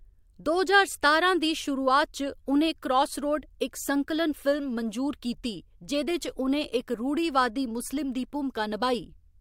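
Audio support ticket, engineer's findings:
Listened through the speech recording and found no faults to report on this one, so no further action is needed.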